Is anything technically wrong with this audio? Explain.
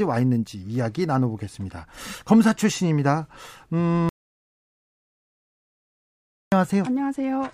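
Yes. There is an audio dropout to silence from 4.09 s to 6.52 s, lasting about 2.4 seconds. The speech cuts off abruptly mid-flow. What follows is silence, with no room tone or background noise at all. Then the speech resumes just as suddenly. The likely cause is lost input, such as a disconnected device, a failed link or a stray mute, while recording carried on writing zeros. Whatever was spoken during that gap is gone.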